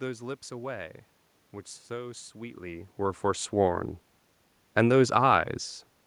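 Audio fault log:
No faults to log for this audio.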